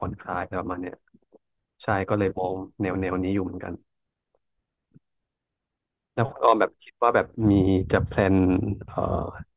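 Speech recording with no audible technical faults anywhere.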